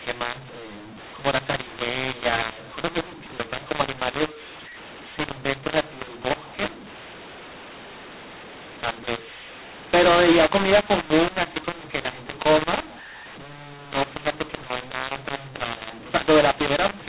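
A mu-law and A-law mix-up runs throughout the speech: samples written with A-law were decoded as mu-law, so levels are scrambled, loud and quiet parts land wrongly, and pauses fill with hiss. The 8 kHz telephone coding itself stays intact, nothing above 4 kHz.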